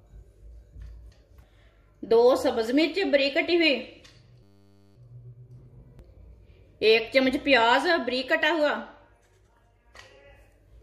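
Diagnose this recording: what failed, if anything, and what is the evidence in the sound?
The driver or buffer stage failed with a system hang loop: the system stalled while the audio hardware kept replaying its ring buffer. From 4.43 to 4.96 s, one 10 ms slice repeats about fifty times, producing a steady 100 Hz buzz.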